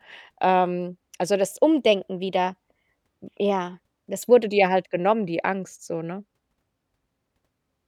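From 1.51 s to 4.44 s a wrong sample rate applies: the samples are clocked out faster than they were captured, without conversion, which fits 44.1 kHz audio played at 48 kHz. The speech runs 1.09 times faster and 1.47 semitones higher, sounding only slightly quicker and higher.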